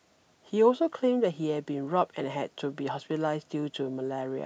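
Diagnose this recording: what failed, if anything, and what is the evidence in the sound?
Nothing has failed anywhere along the chain here; the only thing underneath the speech is a faint bed of room noise sitting about 45 dB down, which belongs to the space the microphone was in rather than to any stage of the system.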